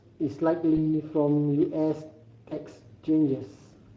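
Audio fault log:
throughout: Speex codec. The speech has a hoarse, grainy texture, and the codec damage is plainly audible. Speex models each short frame with a vocal-tract filter driven by a coded excitation. Here the excitation gets too few bits to match the real waveform, so a rough, noisy residue rides on the voice. The degree of damage points to a middle quality setting of roughly 17 kbps. That is typical of older VoIP and game chat.
0.75–0.80 s and 2.49–2.54 s: VoIP packet loss concealed by the speech codec. At each point the speech briefly smears into a stretched sound that fades. Each gap fits one lost 20 ms frame. The decoder had no data for that frame. It repeated its last pitch and filter at falling gain to cover the hole. Each frame builds on the one before it, so the voice stays weak or distorted for a short moment after the data returns.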